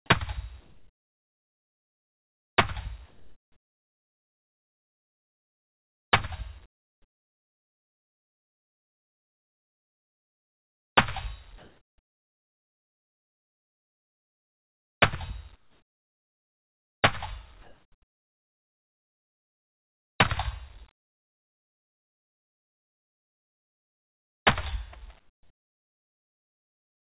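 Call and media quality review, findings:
Gaps between sounds go flat, featureless and hissy, level shifting from about 14 dB down to about 6 dB up: 0.6–2.58, 3.06–6.12, 6.66–10.96, 11.58–15.02, 15.56–17.02, 17.62–20.18, 20.92–24.46, 25.2 s to end. Comfort noise in place of the background, likely from discontinuous transmission, with synthetic noise filling pauses over a band-limited call path with nothing above 4 kHz.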